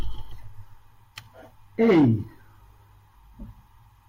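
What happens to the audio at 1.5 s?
Nothing goes wrong at 1.5 s: the speech there plays through intact, with no dropout, click or distortion.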